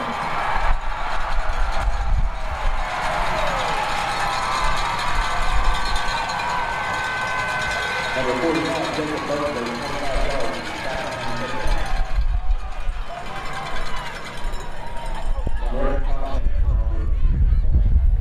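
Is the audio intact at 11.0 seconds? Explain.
No. Right around there, from 10.95 to 11.03 s, you get repeated frames: a 78.4 ms chunk of the audio plays, then plays once more. A short run of compressed frames got written or sent twice, which fits a block of about three frames, so the decoder just ran the same slice again. It comes across as a quick stutter, and the clip ends up 78.4 ms longer than it should be.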